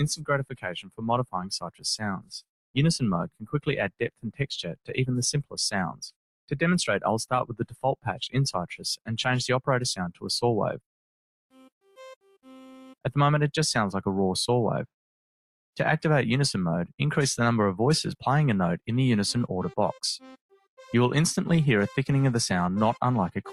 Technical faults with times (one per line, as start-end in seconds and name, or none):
0.00-23.52 noise suppressor applied to music or sounds
0.14-1.85 sound cut by the noise suppressor
2.17-2.43 sound cut by the noise suppressor
3.28-3.54 sound cut by the noise suppressor
3.90-4.94 sound cut by the noise suppressor
7.48-8.27 sound cut by the noise suppressor
8.73-9.09 sound cut by the noise suppressor
11.51-13.05 sound cut by the noise suppressor
20.50-20.79 sound cut by the noise suppressor